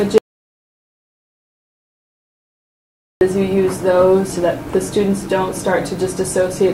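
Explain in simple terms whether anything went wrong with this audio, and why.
Right near the start, at 0.18 s, the sound drops out to dead silence and only comes back at 3.21 s. That's an audio dropout to silence: about 3 seconds gone completely, not even background hiss, most likely from the input briefly disconnecting or getting muted.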